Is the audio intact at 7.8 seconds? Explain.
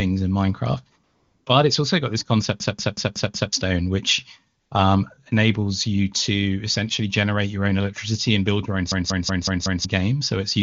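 Yes, at 7.8 seconds the speech is intact, with no dropout, click or distortion to be heard.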